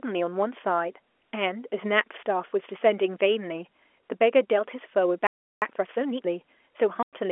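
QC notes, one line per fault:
5.27–5.62 s, playback stall: the speech halts mid-flow and the line drops to dead silence for about 0.35 s before picking up again. This is likely a stall, where the player ran dry of buffered data or its output thread was held up until it recovered.
5.62–6.30 s, time-compressed catch-up: right after the gap, the speech rushes along at about 1.5 times normal speed with its pitch unchanged. The player is working off its backlog by dropping small slices and cross-fading across the joins.
7.03–7.13 s, packet loss filled with silence: a 100 ms hole cuts abruptly into the speech, with hard edges. The receiver substituted silence for missing packets, and the length fits five lost 20 ms packets. The narrow telephone band of the G.711 line is audible around it.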